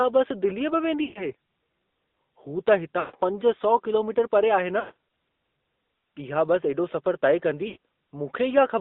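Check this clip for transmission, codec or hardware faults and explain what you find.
Two faults are present: AMR narrowband coding throughout, and four bursts of lost AMR speech frames.

The AMR narrowband mobile codec affects the whole clip. The speech is confined to roughly 200 Hz to 3.7 kHz, with nothing above 4 kHz, and it has a plainly audible buzzy, synthetic edge, which fits a mid-rate AMR-NB mode of about 10.2 kbps. The buzz comes from rebuilding the voice from a vocal-tract filter excited by a few pulses per subframe. That texture separates it from simple telephone-band filtering, which narrows the band but leaves the voice natural.

Lost AMR speech frames occur at 1.04 to 1.33 s, 3.00 to 3.16 s, 4.80 to 4.94 s (right after "किलोमीटर परे आहे") and 7.68 to 7.77 s. Each burst lasts about 80 to 160 ms, which points to runs of four to eight 20 ms frames. When a frame fails, the decoder repeats the last pitch and filter settings at falling gain. 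The sound stretches, smears and fades toward silence, then returns weak for a moment. A packet-loss gap or dropout would instead cut off abruptly rather than decay.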